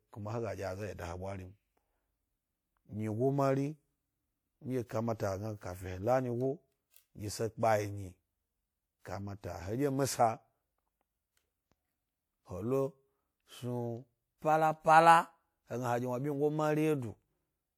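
At about 4.86 s a short hiss creeps in roughly 38 ms ahead of a sharp speech onset, lasting until about 4.89 s, and the onset itself lands soft and smeared rather than crisp. This is pre-echo. The transform codec spread the quantisation noise meant for the loud attack across its whole block, so the quiet stretch just before the attack was filled with that noise too.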